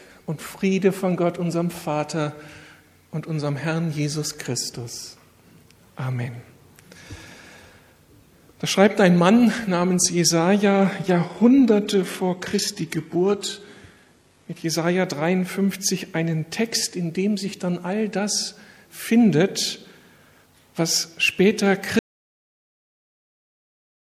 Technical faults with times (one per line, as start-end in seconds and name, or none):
10.65-14.65 adaptive stream at a lower bitrate
21.99-24.19 audio dropout to silence